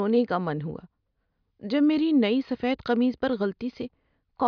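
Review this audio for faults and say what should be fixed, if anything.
Nothing needs fixing: the signal carries the speech without any audible technical fault.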